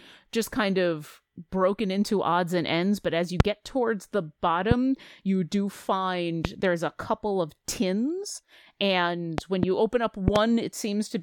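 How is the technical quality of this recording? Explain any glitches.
The recording has loud pops at 3.40–3.42, 4.71–4.74, 6.45–6.47 (before "there's a couple of"), 9.38–9.65 s and 10.28–10.38 s. The last two events hold two pops each. The likely cause is a voltage step from a plug, switch, static or driver glitch. Each pop is a sharp spike around 20 dB above the speech, which continues underneath.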